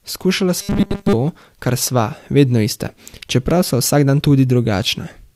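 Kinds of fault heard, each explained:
Robotic sound from repeated short buffers: from 0.58 to 1.14 s the speech turns into a rigid metallic buzz at 200 Hz, likely from a 5 ms stretch looped over most of the audio; unlike dropouts, nothing falls silent and the words stay loosely traceable.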